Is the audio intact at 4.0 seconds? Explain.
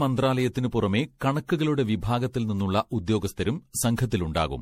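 No. At 4.0 seconds the speech still carries generation loss, which runs through the whole clip. It was likely decoded and re-encoded with MP3 around ten times, in a way consistent with 64 kbit/s. Each pass quantised again on a shifted frame grid, so noise and spectral gaps accumulated. The result sounds swirly, smeared and hollow, with blurred consonant attacks and nothing above 16.4 kHz.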